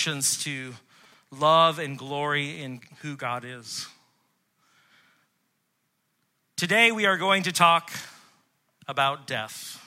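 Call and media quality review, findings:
GSM signalling bursts, 1.04 to 3.03 s. Galloping dit-dit-dit of short buzzes repeating at about 217 Hz, roughly 30 dB below the speech. Probable source: nearby 2G handset exchanging signalling with the network ahead of an incoming call or text. Mechanism: audio circuit rectifies the pulsed RF envelope into audible buzz. Check handset proximity to the capture chain and the RF shielding on mic and preamp inputs.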